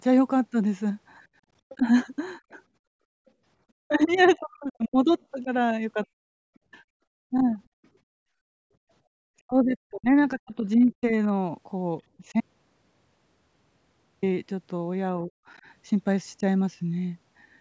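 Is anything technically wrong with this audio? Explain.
Yes. This speech clip, passed through call processing with nothing above 8 kHz, has four kinds of fault.

Background gated by the echo canceller occurs at 1.34–1.45 s and 7.69–7.81 s. The canceller clamped the microphone while the loudspeaker played, so room tone drops by about 10 dB for a brief moment, then by about 32 dB for roughly a tenth of a second, before recovering.

The other side's voice leaking through appears faintly at 1.69–1.79 s, around 25 dB below the talker. It returns for a longer stretch at 3.28–6.59 s, around 30 dB down. This is likely residual loudspeaker echo that the canceller failed to subtract from the microphone signal.

Speech suppressed in double talk affects four spans. At 1.78–1.84 s the dip is mild, around 5 dB. At 3.84–7.45 s the cuts reach around 40 dB, totalling about a second and a half. At 9.44–11.12 s they again reach around 40 dB, totalling about a second. 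At 15.26–15.31 s the dip is around 10 dB. This is likely the canceller attenuating the talker while both sides spoke.

An audio dropout to silence runs from 12.40 to 14.23 s, removing 1.82 s. The signal cuts to silence with no room tone, then resumes mid-flow. This is likely an input loss while the recorder kept writing silence.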